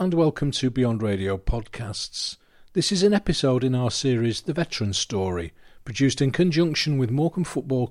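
No technical faults can be heard anywhere in the recording; the signal stays continuous and steady throughout.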